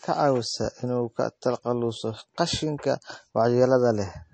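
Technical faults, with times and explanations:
Throughout, MP3 compression: the speech has nothing above 8.3 kHz, and the codec damage is plainly audible as a watery, swirling texture with metallic edges on s sounds and smeared consonant attacks. This is likely MP3 encoding at a low bitrate, which fits about 34 kbps. The encoder cut the treble and dropped weak frequency lines that flicker frame to frame. A spectrogram shows a flat ceiling at 8.3 kHz and speckled gaps below it.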